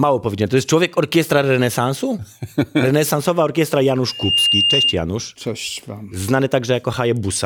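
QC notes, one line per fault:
4.08–4.96 s, loudspeaker feedback squeal: the mic-to-speaker loop runs away at 2.8 kHz, swelling over about a third of a second into a piercing tone a few dB louder than the speech; on a spectrogram it is a bright horizontal line that thickens until it cuts off.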